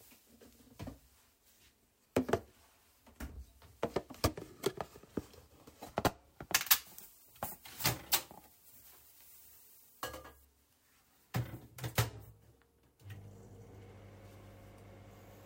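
From 6.54 to 10.45 s the sound turns thin, bright and hissy: pre-emphasis left on, a 50 µs FM treble boost never undone, lifting 10 kHz about 11 dB.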